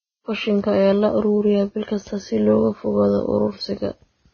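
From start to finish the speech has no content above 6.5 kHz, a hard ceiling that leaves sibilants dull and takes the air out of the upper range. The file itself is a high-bitrate MP3, so the missing band was likely lost earlier: low-bitrate audio saved at a high bitrate. The cut-off and the leftover artefacts point to a heavily compressed first encoding, something like Vorbis around 16 kbit/s. Re-encoding cannot restore what that first pass discarded.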